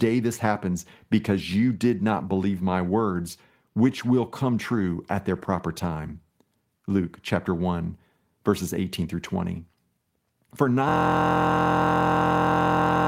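System hang loop from 10.89 s to the end of this speech recording: the driver froze and one 23.22 ms slice repeats exactly, a steady 43.1 Hz buzz that fits a 1024-sample ring buffer.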